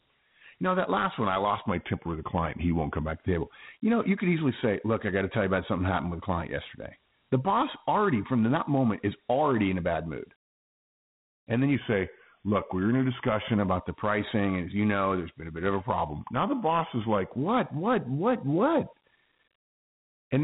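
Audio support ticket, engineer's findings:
Dialogic VOX ADPCM throughout: gritty hiss riding the speech, band stops near 3.9 kHz. 4-bit ADPCM quantisation noise, coarse step-tracking plainly audible. The 32 kbps rate fits 8 kHz sampling; the telephone band caps the top.

Drift correction step, 1.68–3.08 s, after "last one I lost", back by "to the table": speech drops about 116 cents, slows 6.5%, then snaps back. Likely clock-sync rate jump.

Same step, 11.75–13.59 s, between "then you" and "about the pricing": identical slowdown and pitch sag.

Same again, 16.09–17.31 s, after "a bit of a", clear before "what what what what". Same amount, same snap back.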